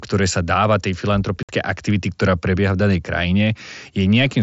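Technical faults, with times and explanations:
1.43–1.49 s: unconcealed Bluetooth headset packet loss. A 60 ms hole cuts the speech with abrupt edges, because missing packets between headset and phone were replaced by silence or an idle pattern.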